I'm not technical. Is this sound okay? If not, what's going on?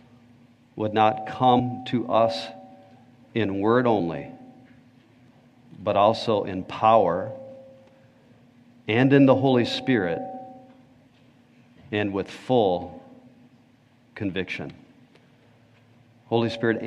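No. Compressed frames skipped, at 1.58 s and again at 3.99 s. The file stores sound in small chunks, and here some chunks never got played, either missing or rejected as damaged by the player. The sound jumps ahead, by about 150 ms the first time and about 70 ms the second, which fits chunks roughly 26 ms long.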